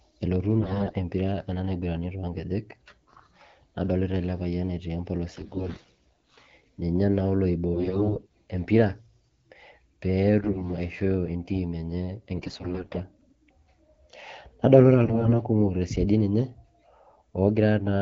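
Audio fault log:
0.60–0.96 s, 5.33–6.34 s, 7.74–8.33 s, 10.42–10.70 s, 12.36–13.00 s and 15.04–15.32 s: AMR bit errors. The voice turns hoarse, scratchy and gargly, roughest in the first burst before "empira ena". Other bursts follow "ele payian etii empolos" and "aishoo entim enye". Pitch and level roughly hold. Flipped low-priority bits in the 12.65 kbit/s wideband frames misplace the excitation pulses and skew the fine pitch, gain and spectral values.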